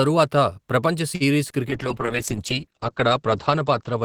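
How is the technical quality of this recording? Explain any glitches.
Two faults affect this speech recording: a brief stall and then a lasting loss of quality.

Short stall from a late packet, 1.15 to 1.23 s: a packet arrived late, so the receiver held the last sound for about 50 ms, then resumed without losing anything, leaving a slightly stretched syllable.

Call bitrate drop, from 1.69 s to the end: the encoder was forced to spend far fewer bits, apparently falling from around 32 to 9 kbps. High frequencies above 8 kHz disappear, and the speech sounds muffled and rough, worst for about 1.5 s.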